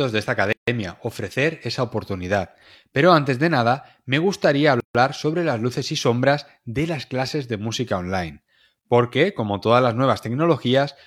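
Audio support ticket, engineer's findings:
Gap at a join of encoded pieces, speech: silences at 0.53–0.68 s (150 ms) and 4.80–4.95 s (146 ms). Encoder delay and padding left untrimmed at the joins. Unlike a dropout, speech resumes exactly where it stopped.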